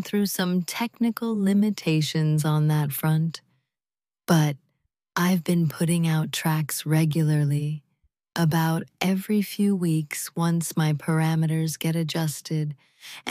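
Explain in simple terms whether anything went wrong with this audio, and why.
Nothing went wrong here: there are no dropouts, glitches or other faults anywhere in the audio.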